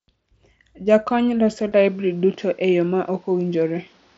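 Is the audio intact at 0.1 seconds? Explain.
Yes, at 0.1 s the speech is intact with no fault, carried through the Bluetooth mSBC headset codec path, which passes nothing above about 7.7 kHz.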